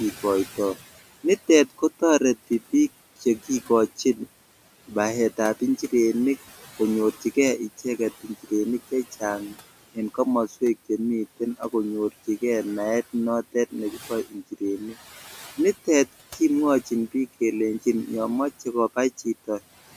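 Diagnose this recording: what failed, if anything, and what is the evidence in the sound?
Throughout, the background sinks between phrases and swells back under the speech. These are noise suppressor artifacts from call processing. The suppressor pulls bands it judges to be steady noise down by about 16 dB, frame by frame, so the room noise, about 18 dB below the speech, keeps shifting level.

Soft consonants and word endings sound swallowed at 1.48 to 4.19 s, 6.79 to 12.42 s, 13.13 to 14.96 s and 15.57 to 19.49 s, with the quietest parts dropping by about 17 to 18 dB. This is speech cut by the noise suppressor. Low-level speech fell under its noise estimate and was turned down with the background. Each span loses a few hundred milliseconds in total, and the second span loses the most.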